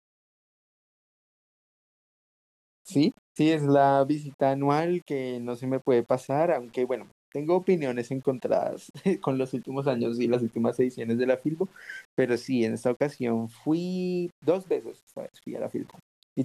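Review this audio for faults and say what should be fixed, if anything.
Low bit depth without dither runs through the whole speech clip. A grainy, buzzy distortion rides on the voice, rising and falling with it, sitting roughly 35 dB below the signal, and fading syllables turn gritty instead of trailing off cleanly. The likely cause is rounding to a coarse level grid, which fits an 8-bit path, so the error tracks the waveform. Dithered requantisation would instead leave a steady, signal-independent hiss that stays constant through pauses. To fix it, keep at least 16 bits throughout and apply dither at any stage that reduces word length.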